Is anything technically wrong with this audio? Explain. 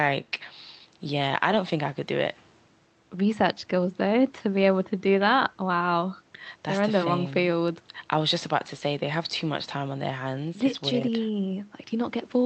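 No, nothing is technically wrong: the speech has the normal character of a call path, with the top end stopping around 8 kHz as an Opus link at these settings does, and that is expected behaviour rather than a fault.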